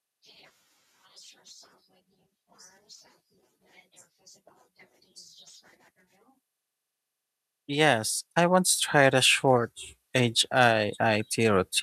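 From 7.66 s to 11.77 s the speech and the background behind it swell upward together. The level climbs steadily over those four seconds rather than jumping, ending about 8 dB louder. This is automatic gain rising: the gain control judged the incoming signal too quiet and raised its amplification gradually. Because it scales the whole input, the room noise is lifted along with the voice.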